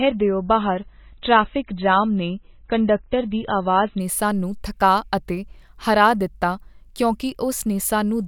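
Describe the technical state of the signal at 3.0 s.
At 3.0 s the player is still on the opening low-bitrate version of an adaptive stream, from 0.0 to 4.0 s. The speech has nothing above 4 kHz and stronger codec artefacts, which fits MP3 at around 16 kbit/s. It jumps to MP3 at 128 kbit/s just before "ਨੇ ਸਾਨੂੰ".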